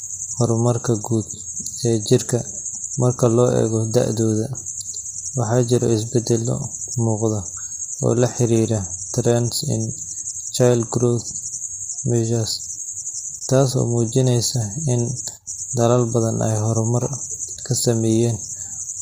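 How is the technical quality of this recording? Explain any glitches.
The quality is poor throughout the speech. From start to end it sounds rough and grainy. Noise fills the gaps between the harmonics, and the top band sounds thin and synthetic. That is likely low-delay AAC compression at a low bitrate, perhaps near 24 kbps. Its short frames resolve pitch harmonics poorly.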